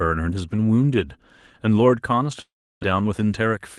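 A speech clip with a gap at 2.41 s that runs to 2.85 s. Right at the break, the last sound gets stretched into a fading buzz. After that you're left with roughly a third of a second of near silence. When the speech comes back, about 0.4 s of it is just gone, not delayed. That's most likely a long network dropout: packets stopped arriving, the receiver's concealment kept the tail going until it gave up, and the lost stretch never played. The audio has the band-limited, coded character of a call codec, topping out around 12 kHz, which fits Opus on a WebRTC path.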